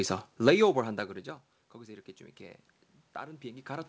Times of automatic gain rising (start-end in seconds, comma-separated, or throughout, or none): 1.72-3.88